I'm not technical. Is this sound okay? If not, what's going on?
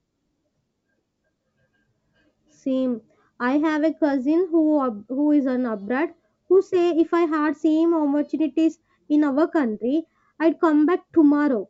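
Yes, nothing wrong can be heard in this recording.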